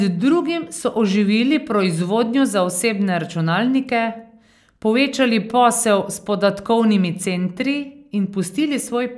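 No technical faults are audible in the signal at any point, and the speech stays continuous and intact throughout.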